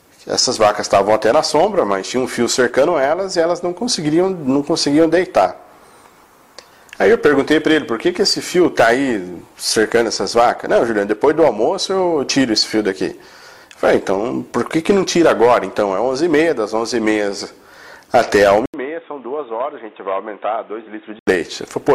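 At 18.66 s the sound drops out for a brief 80 ms gap, then returns dull and boxy until 21.27 s, with nothing above 3.8 kHz, a level roughly 10 dB lower, and a new noise floor around 30 dB beneath the signal. This points to an input switched to a poorer device, likely a fallback microphone or headset call profile. On a spectrogram the upper band is sharply cut off; the waveform shows a short flat gap, then smaller amplitude.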